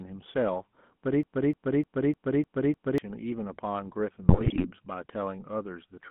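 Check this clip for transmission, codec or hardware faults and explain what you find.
Yes, there's plenty here: a codec running the whole way through, a stuck loop early on and a burst of corruption near the end.

The whole clip has been through the GSM full-rate codec, and it's plainly audible. The coder models the vocal tract and drives it with thinned-out pulse excitation, giving the voice that buzzy, gravelly edge. The band runs only from about 150 Hz to 3.6 kHz, which fits the 13 kbps full-rate coder.

From 1.23 s to 2.98 s there's a broken-record loop: a piece of about 0.30 s plays six times back to back. The player or stream likely stalled and kept resending its last fragment, so whatever should have played there is gone.

Between 4.29 s and 4.67 s you get GSM bit errors. Flipped bits reached the decoder and corrupted its filter, pitch and gain values, so the speech breaks into squawks, pops and gargling. 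The damage fits an error rate of a few percent.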